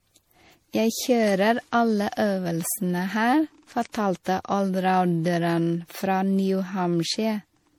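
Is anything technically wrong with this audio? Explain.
Yes. Throughout the speech, the sound is swirly, smeared and hollow, with blurred attacks, more degraded than one lossy pass would leave. This is likely generation loss: repeated MP3 encoding, pointing to about 64 kbit/s and around five passes, each re-quantising on a shifted frame grid so noise and spectral holes accumulate.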